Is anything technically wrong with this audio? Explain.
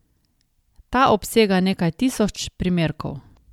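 Yes. There is one fault, near the very end of the speech. From 3.33 to 3.38 s, about 50 ms, there is damaged data in a compressed stream. Some bytes in that stretch of the file were lost or overwritten. The decoder misreads those frames, loses its place and hunts for the next valid frame header. What you hear is a brief chirp, squawk, click or short hole that breaks abruptly into the sound.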